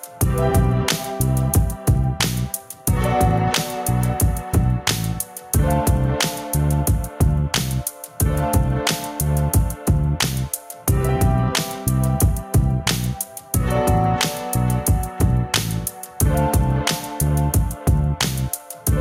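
Recorded everyday sounds, with gain pumping throughout and a gain swing of around 10 dB. Loud and quiet events sit unnaturally close in level, giving a squashed, pumping character. This gain pumping is likely caused by the input gain being set far too high, with a fast limiter or compressor clamping down on each peak and releasing in between.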